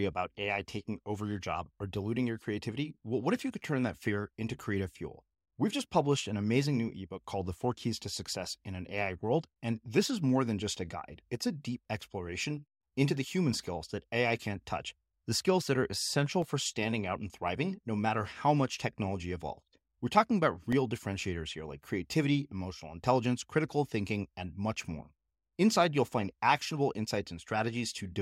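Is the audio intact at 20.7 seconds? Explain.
No. At 20.72 s, between "talking about" and "differentiators here like creativity", there is a block of digital silence about 0.73 ms long, consistent with a 32-sample gap. Output briefly drops to silence and snaps back with no fade, so the two hard edges merge into a single tick rather than an audible hole. Unlike a faded dropout, nothing softens the edges, and the cut is too brief to register as missing sound.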